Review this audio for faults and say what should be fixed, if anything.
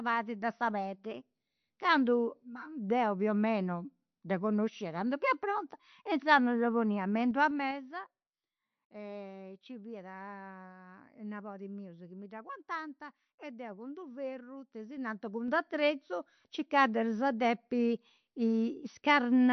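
Likely low-bitrate MP3 compression, around 48 kbps, strips everything above 6 kHz and lets weak frequency lines flicker, so the speech sounds dull and watery throughout. Encode at a higher bitrate or use a lossless format.

Zipper noise comes from a level change applied in coarse 3 dB steps with no smoothing between them. Each jump clicks, so a ticking zip rides on the speech while the level moves. It happens twice:

From 7.21 to 8.15 s, just after "inzandus dda ponia me", the level drops about 15 dB at roughly five steps a second.

From 14.59 to 15.79 s, just after "e deu cun d'u'", the level rises about 15 dB at roughly four steps a second.

Ramp gain changes per sample or interpolate across each buffer.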